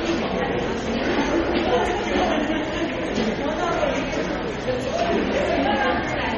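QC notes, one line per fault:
Throughout, MP3 compression. Nothing is heard above 11.2 kHz, so the top end is dull. The damage is heavy: weak detail flickers in and out, giving a watery, swirly texture. The likely cause is very low-bitrate encoding, which fits about 32 kbps.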